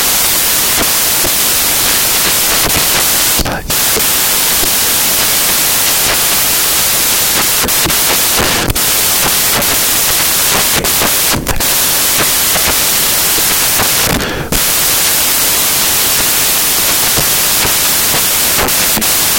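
Throughout, the samples are built from the wrong bytes: low-order bits become each value's large part, so the speech turns into loud, harsh broadband noise, close to white on loud sounds.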